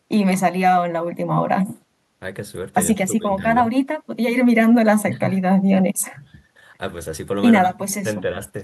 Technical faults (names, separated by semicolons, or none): none